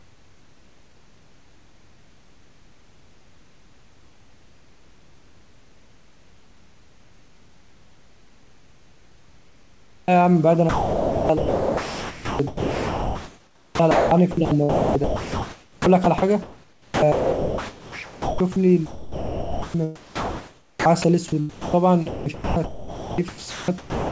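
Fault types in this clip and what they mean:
Comfort noise in place of the background: From the start to about 10.1 s, the background is a smooth, steady hiss with no detail. It sits about 12 dB below the real room noise that appears once speech begins. The likely cause is discontinuous transmission. The sender's voice detector treated this opening stretch as silence and stopped sending, so the receiver filled roughly ten seconds with synthetic noise shaped approximately like the room.
Onset clipped by the voice detector: At about 10.0 s the speech starts abruptly, with no soft build-up, as if its first sliver had been shaved off. About 80 ms of the beginning is missing and is covered by the same synthetic hiss. The likely cause is a voice detector that was slow to notice the sound had resumed. It withheld those first moments, and the receiver kept playing comfort noise until real audio arrived.
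Jitter buffer slow-down: Between about 10.10 and 10.34 s, the speech drags slightly. It runs at about 87% of normal speed while keeping its pitch, so sounds are drawn out and a faint warble can creep in. The receiver's jitter buffer was running short of audio. To build a reserve, it repeated single pitch periods several times in a row, adding 39 ms to this short stretch without changing the pitch.
Sound chopped by the voice detector: Across about 10.64 to 18.56 s, 18.86 to 21.04 s and 22.08 to 24.10 s, the speech sounds choppy. Parts of the speech drop out. In the first stretch alone about 6.3 s is replaced. The likely cause is the sender's voice detector switching repeatedly between sending and not sending. Each gap was filled with comfort noise.
Sound dropped by the voice detector: At about 21.50 to 21.74 s, the speech gives way to steady hiss for about 240 ms and then returns. Around 150 ms of actual speech is lost in that gap. 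The likely cause is the voice detector mistaking part of the speech for background and stopping transmission. The receiver played comfort noise in its place until the detector triggered again and sending resumed.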